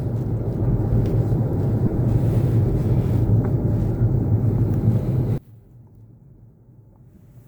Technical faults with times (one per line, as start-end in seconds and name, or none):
1.86-1.98 lost LE Audio frames
4.24 lost LE Audio frames
5.38-7.47 one channel inverted
7.15 lost LE Audio frames